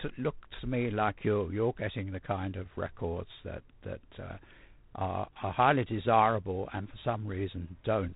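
A harsh, rasping hiss rides on the speech from start to finish, swelling as the speech gets louder and shrinking as it softens, while everything above about 3.8 kHz is missing. This is G.726 ADPCM coding: each sample is sent as a few bits describing its difference from an adaptive prediction, and so few bits leave coarse quantisation noise that tracks the signal level. The plainly audible roughness fits the 24 kbit/s mode.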